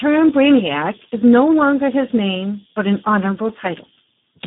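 Speex codec damage runs throughout: heavy CELP coding, consistent with roughly 8 kbps, leaves the speech hoarse and noisy, band-limited near 150 Hz to 3.6 kHz, with nothing above 3.8 kHz.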